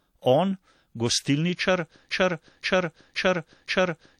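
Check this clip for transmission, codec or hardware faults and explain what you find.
One fault is present. From 2.10 s to the end, a 0.52 s slice of speech repeats four times: a broken-record loop, likely a stalled stream resending its last fragment.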